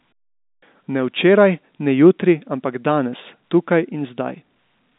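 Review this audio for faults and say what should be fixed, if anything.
No faults; nothing to fix.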